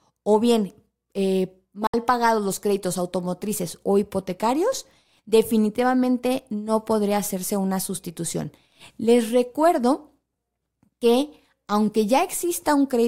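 At about 1.87 s the speech drops abruptly into silence, right after "o bien eh", with only a very brief fade of about 3 ms rather than a hard click, and it returns at about 1.94 s on "pagados los créditos automotrices". This is a digital broadcast dropout: the receiver stopped getting usable frames and muted its output until valid ones arrived again. The hole is about 64 ms, consistent with a couple of lost frames, and that stretch of audio is simply gone.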